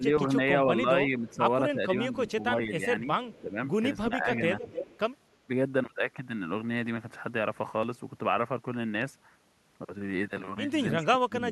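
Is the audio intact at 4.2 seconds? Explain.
No. At 4.2 seconds the clip is inside a stretch of speech suppressed in double talk, running from about 1.1 to 4.44 s. Across that span the speech level dips in patches totalling around a second, at worst by roughly 10 dB. The likely cause is an echo canceller that, with both ends talking at once, could not tell the near talker from the loudspeaker echo and attenuated both together.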